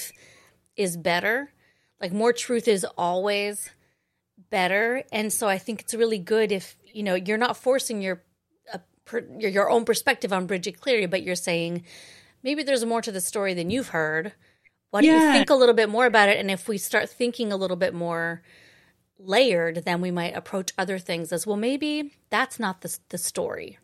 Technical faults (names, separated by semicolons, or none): none